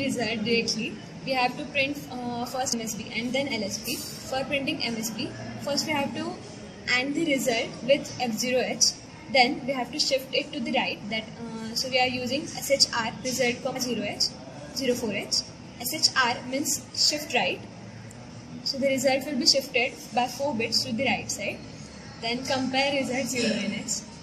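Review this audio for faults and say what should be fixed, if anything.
Compressed frames skipped at 2.72 s and 13.75 s: each time the audio jumps forward, losing about a tenth of a second at the first point and somewhat less at the second. That fits a handful of roughly 23 ms frames being dropped, either missing from the file or rejected by the decoder as damaged. Re-encode from an intact source and verify the file decodes without errors before delivery.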